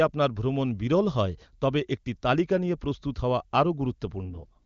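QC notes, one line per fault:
4.24–4.66 s, AMR rate drop: the speech turns rough, buzzy and synthetic for the last stretch, with the band unchanged and no gap. This fits the AMR-WB coder, clear at its 23.85 kbit/s mode until here, falling to 6.6 kbit/s and spending bits on error protection.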